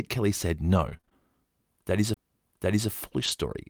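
Between 0.73 and 1.13 s the speech turns choppy, with several short holes up to 21 ms patched by stretching the previous sound; this is repeated packet loss (robotic sound), with about a quarter of that span concealed. At 2.14 to 2.17 s a tick and a brief mute of roughly 30 ms precede an abrupt jump, the signature of a CD skip where the laser leapt to another turn of the disc. From 3.20 to 3.30 s the audio briefly grows rougher and noisier without any gap, about 60 ms in total, consistent with a lost packet rebuilt from error correction, decoded from low-bitrate copies carried in the following packets.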